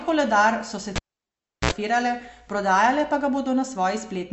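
A speech recording carries plainly audible codec damage from start to finish, most likely from MP3 compression at a low bitrate, on the order of 48 kbps. Nothing remains above 8 kHz, so the top of the spectrum is cut off. Weak spectral detail flickers in and out between frames, giving the speech a watery, swirling texture. At 0.96 s a pop marks the cable being pulled and plugged in again. About 0.70 s of near silence follows while the connection is open. Then a short burst of 60 Hz mains buzz, roughly 63 ms long, is heard as only the plug tip makes contact. A second pop at 1.71 s brings the signal back.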